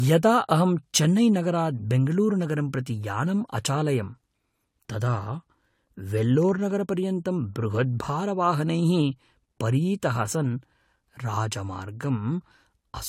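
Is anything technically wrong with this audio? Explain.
Yes. Throughout the speech, nothing sounds above about 16.6 kHz, and two different sets of compression artefacts are heard at once. This points to transcoding between lossy codecs, likely an AAC-type encode re-encoded as Vorbis. The second encoder spends bits on the first one's artefacts and adds its own. A single low-bitrate encode would show only one set of artefacts, not this layered mix.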